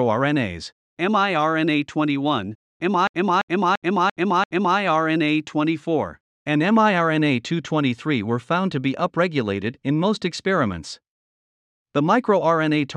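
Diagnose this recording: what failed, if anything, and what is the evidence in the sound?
A system hang loop at the driver or buffer stage. From 3.07 to 4.78 s, one 341 ms slice of speech repeats five times, a stutter at about 2.9 Hz. That fits a 16384-sample ring buffer replaying while the host froze. Little or no audio seems missing.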